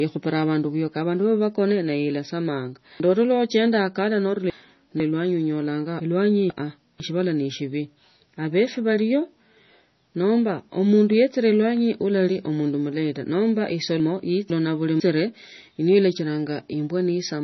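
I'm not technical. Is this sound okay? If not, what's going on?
No. The recording was likely squeezed hard by MP3 compression, which throws away detail to save space. Everything above about 6 kHz is gone, so the speech sounds dull and muffled, with a watery, swirly edge and blurred starts to sounds.

There are also chunks out of order. Half-second pieces were stored late and play after the pieces meant to follow them. Right after "abandu nabakona nayo esamanga", from 3.0 to 5.0 s, one piece lands three places late. The same happens, one place late, at 6.0 to 7.0 s and 14.0 to 15.0 s, each heard as a jumbled moment.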